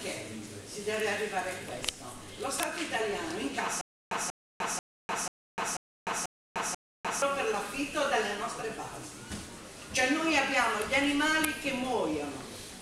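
From 3.81 s to 7.22 s the audio falls into a stutter with silent gaps: the same 188 ms fragment plays seven times, each followed by about 301 ms of digital silence, so it returns every 489 ms at a steady pace. This points to a likely playback or stream stall, with each retry replaying the last buffered piece before running empty. Unlike simple dropouts, the gaps alternate with identical repeats, and the sound that belonged in that span never arrives.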